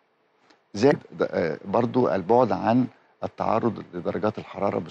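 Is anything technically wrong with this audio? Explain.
Yes. From 0.90 to 0.96 s the audio jumps ahead, and a short garbled stretch follows. The likely cause is a broken MP3 bit reservoir. Frames were lost, so the next frames fetched borrowed data from the wrong bytes. The 56 ms span fits about two 26 ms frames.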